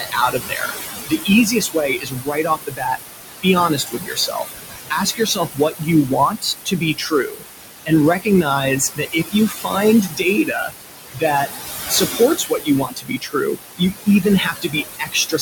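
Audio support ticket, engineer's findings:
Noise suppressor artifacts, whole clip. Suppressor gating the room noise, itself only about 6 dB under speech, by about 18 dB per band, frame by frame. Background drops out between phrases, pumps back under speech.

Mechanism: noise estimate sits close to speech level, so band gains swing hard frame to frame.

Speech cut by the noise suppressor, 0.0–3.0 s, 3.43–4.55 s, 4.9–11.5 s, 11.89–15.42 s. Suppressor classifying low-level speech as noise, attenuating it with the background. Drops up to about 20, 15, 21 and 22 dB respectively. Roughly two, under one, three and two seconds affected in each span.

Sound: soft consonants, word endings and quieter passages swallowed or faint, speech level dipping mid-phrase. Mechanism: speech energy near the noise floor falls under the suppressor's threshold, so gain reduction meant for noise lands on speech.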